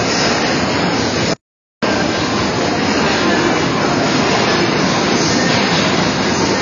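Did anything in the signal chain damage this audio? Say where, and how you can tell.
Yes. A second, slower capture path or an edit likely mixed the audio in twice. A full-band copy trails by about a second, a few dB quieter, with no decay or room colour: a doubled audio track.

At the codec stage, AAC compression likely at a low bitrate, around 24 kbps, removed everything above 6.9 kHz. The sound is dull and smeared, with a warbling, fizzy texture.

The input was likely lost through a disconnected device, a failed link or a mute, and the recorder wrote silence. From 1.34 to 1.83 s there is an audio dropout to silence lasting 0.49 s, with no room tone.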